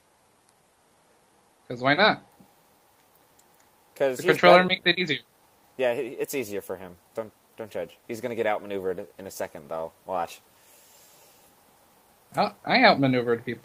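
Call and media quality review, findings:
No audible transmission or processing defects found; the signal stays continuous throughout.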